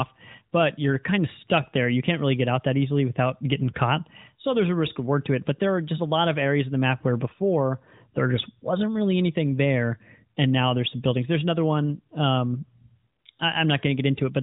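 Nothing stood out on listening to this speech, which comes through the AMR narrowband mobile codec at what sounds like its 12.2 kbps mode, with nothing above about 3.8 kHz.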